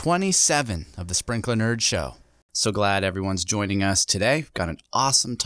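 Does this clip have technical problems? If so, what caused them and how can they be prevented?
No, no technical problems heard.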